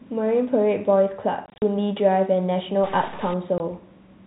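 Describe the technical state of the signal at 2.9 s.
At 2.9 s you're inside a stuck-bit stretch, running 2.84 to 3.34 s: one data bit is likely jammed, so about half the samples jump by its weight, giving grainy noise or harsh buzzy distortion, depending on the bit, over the speech's telephone-band sound.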